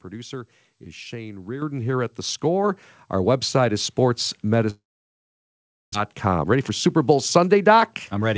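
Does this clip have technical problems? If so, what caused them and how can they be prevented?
Yes. At 1.62 s, just before "here at", the level of the sound and its background jumps together by about 8 dB. This is the microphone volume stepped up: the call software judged the input too quiet and raised the device gain in a single step. Setting the microphone level correctly beforehand and disabling automatic gain adjustment in the call software prevents this.

From 4.70 to 5.95 s the sound trails off into a fading buzz and then about 1.1 s of near silence, and it resumes with roughly 0.8 s of material gone. The likely cause is a long network dropout, with the receiver filling the gap for about 1.24 s until real audio arrived again. A stable wired connection, or a network with less congestion and packet loss, prevents this.

From 6.13 s to the end the sound runs about 10% fast at unchanged pitch and feels hurried. 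This is jitter buffer speed-up. After the dropout the delay had grown by a large amount, and the receiver trimmed short pitch-period pieces, roughly a fifth of a second in total, to catch up. Avoiding the delay spikes that cause this backlog, again by keeping the network stable, prevents the hurried playback.

The band-limiting above 8 kHz fits a wideband call codec such as G.722.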